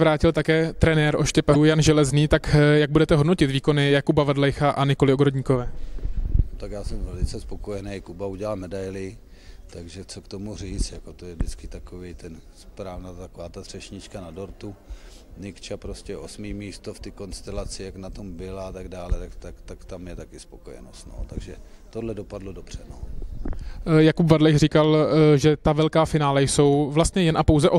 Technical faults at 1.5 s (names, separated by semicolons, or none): damaged data in a compressed stream